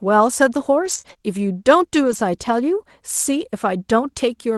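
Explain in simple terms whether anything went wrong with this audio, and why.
Two kinds of fault show up in this speech, both caused by pieces of the call's data going missing in transit.

The first is a lost packet rebuilt from error correction, from 0.81 to 0.99 s, 1.05 to 1.24 s and 2.03 to 2.17 s. The sound never drops out. Instead it turns briefly rough and grainy. Each missing chunk was replaced by a cruder backup copy sent along with the next one. What sets it apart from concealment is that the real sound keeps going, just at lower quality.

The second is short concealed packet loss, at 1.01 to 1.05 s and 1.13 to 1.17 s. A tiny slice never arrived, so the receiver guessed by stretching out the sound just before it. That comes across as a quick smear or wobble rather than a rough patch. Because the audio is invented rather than recovered, a short sound in that spot can vanish entirely.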